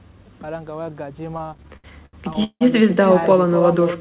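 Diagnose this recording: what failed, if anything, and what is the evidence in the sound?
Call processing failed to remove echo, so an echo with no canceller runs through the whole speech clip. Every phrase returns about 11 dB down, roughly a third of a second later, thinner than the original. The far end's loudspeaker feeds its microphone, and the sound comes back after the network round trip. On a waveform each syllable has a smaller delayed twin. A spectrogram shows ghost copies of the harmonics shifted right by a constant offset.

The network delivery stage shows repeated stalls (stutter) between 1.38 and 2.63 s. Packets arrived late or too slowly, and the jitter buffer ran dry about fourteen times. Each time the receiver extended the last sound, fading it across the longer waits, the longest lasting 168 ms. Nothing is lost, but roughly a third of that span is stretched filler, so the speech drags and hiccups. 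A spectrogram shows smeared, repeated frames. A waveform shows looped, tapering segments. The 4 kHz band limit of the G.711 call codec is visible above both.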